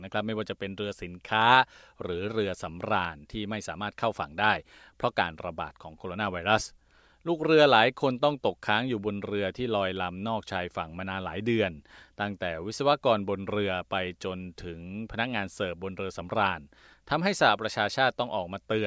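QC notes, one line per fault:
No faults found across the speech audio; nothing to log.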